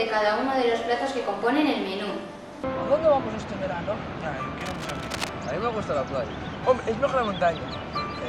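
From 4.61 to 5.30 s, a burst of cable scratch noise sits over the sound. It is dense, uneven scratching and rustling, roughly 10 dB below the main signal. A worn cable or connector being moved is the likely cause, its contact resistance changing rapidly.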